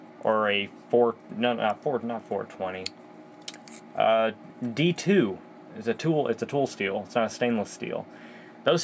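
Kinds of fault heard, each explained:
No faults heard; the sound has been through call microphone processing, with the lowest bass rolled off by its high-pass filter and nothing above 8 kHz.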